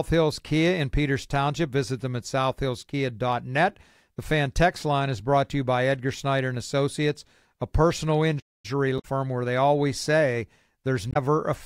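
Speech clip with two kinds of fault. At 8.39 s, just after "a personal", the audio cuts out for about 0.24 s, to 8.65 s, a gap that points to a likely playback stall, where the player ran short of data or its thread was held up. Damaged data in a compressed stream then disrupts the sound from 8.96 to 9.05 s, just before "where they always say", and again from 11.10 to 11.17 s. In each case the decoder misreads corrupted frames and has to resynchronise on a later frame header, producing a brief defect.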